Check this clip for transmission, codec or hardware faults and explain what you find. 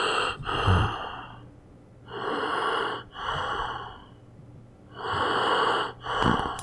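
Nothing in these everyday sounds points to a problem with the transmission, the codec or the hardware, so there's nothing here to flag.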